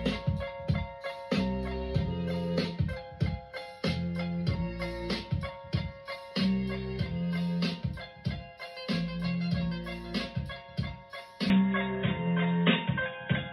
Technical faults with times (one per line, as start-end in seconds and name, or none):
11.50-13.53 input switched to a poorer device